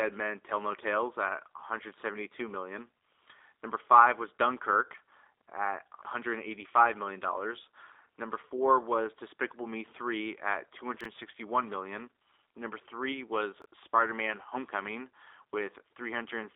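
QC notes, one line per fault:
Throughout: G.729 codec. The speech has gone through the 8 kbit/s G.729A path, which rebuilds each 10 ms frame from a vocal tract filter, a pitch predictor and a few pulses, and passes only the 300 Hz to 3.7 kHz line band. The result is muffled, slightly rough and synthetic, with the codec damage plainly audible.
11.01–11.05 s and 13.62–13.65 s: chunks out of order. Chunks of about 11.6 ms were written late and played after the ones that should follow them. At 11.01 s the chunk sits three places late, and at 13.62 s two. No audio is lost, but each spot has three hard joins, heard as a brief jumbled stutter.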